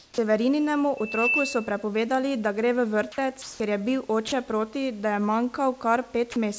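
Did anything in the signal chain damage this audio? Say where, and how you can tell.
Yes. From 0 to 0.18 s, and again from 4.28 to 4.32 s just before "proti da je", the speech gives way to a flat, steady hiss. This is sound dropped by the voice detector. The call processing likely judged the speech to be background and substituted comfort noise, losing about 0.1 s at the start.

From 0.97 to 1.86 s a pure 2.6 kHz tone swells over roughly a third of a second into a squeal about 5 dB above the speech. This is loudspeaker feedback squeal, an acoustic loop between loudspeaker and microphone whose gain exceeded one at that frequency.

Between "da gre v" and "ker je", from 3.42 to 3.60 s, the room's textured background becomes a smooth, featureless noise about 3 dB different in level. This is comfort noise in place of the background. The sender likely stopped transmitting, and the receiver synthesised noise to fill the gap.

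At 3.58 s, "ker je" begins abruptly, missing about 20 ms of its soft start. This is an onset clipped by the voice detector. The detector was likely slow to resume transmission, so the first moment went unsent. All of this sits inside the G.722 call path's band limit at 8 kHz.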